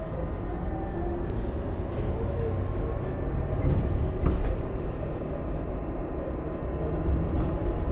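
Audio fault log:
1.3 s, skip ahead: playback jumps forward with no gap, dropping roughly 0.7 s of sound, as queued audio was discarded and both sides spliced directly together.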